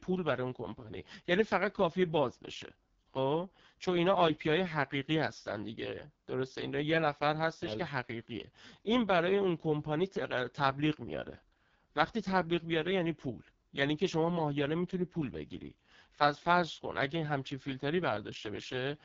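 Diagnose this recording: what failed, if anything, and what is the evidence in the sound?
The speech is damaged at the codec stage by AMR wideband (HD Voice) coding throughout. It sounds rough and raspy, which fits AMR-WB's lowest 6.6 kbit/s mode. Nothing is present above 7.5 kHz, and the noise-like band from 6.4 to 7 kHz separates this from plain low-pass filtering or narrowband telephony.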